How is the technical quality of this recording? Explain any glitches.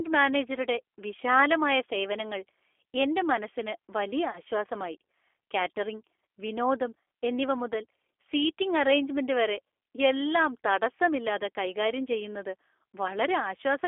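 Quality is limited by low-bitrate telephone coding throughout, with one brief dropout.

G.729 codec: across the whole clip the sound is confined to roughly 300 Hz to 3.5 kHz and has a rough, synthetic edge. This points to an 8 kbit/s pulse-based speech coder modelling each frame. Unlike plain band-limiting, it adds that artificial graininess.

VoIP packet loss concealed by the speech codec: from 4.30 to 4.40 s, just after "മനസ്സിന് വലിയ", the sound is stretched and fades. This fits a single lost packet of about 30 ms. The decoder extrapolates the previous frame, and its lingering recovery distinguishes it from a clean silence gap.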